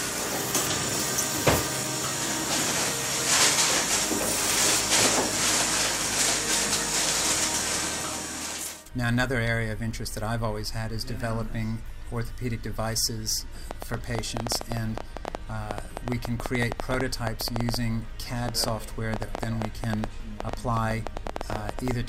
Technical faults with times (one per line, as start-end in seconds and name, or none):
13.71-21.92 train of clicks